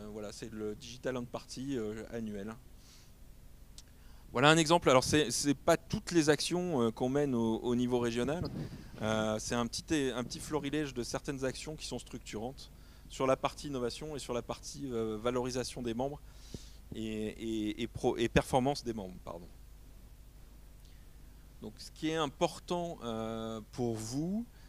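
At 8.43 to 8.47 s a brief glitch cuts through the audio. This is damaged data in a compressed stream: corrupted bytes made the decoder misread those frames, lose sync and hunt for the next valid frame header before playback resumed.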